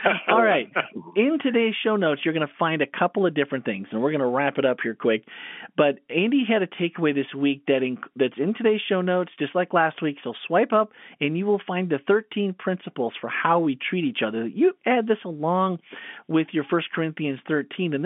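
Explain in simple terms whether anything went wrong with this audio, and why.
Nothing stood out on listening to this telephone-quality speech recording, and it sounds the way an ordinary phone line does.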